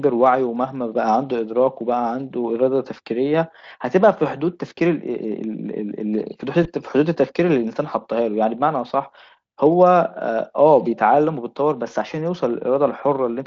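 VoIP packet loss concealed by the speech codec at 4.77 to 4.79 s and 6.63 to 6.69 s: each sounds like a single missing 20 ms frame, which the Speex decoder fills with a brief, fading buzz or coloured noise extrapolated from the preceding speech.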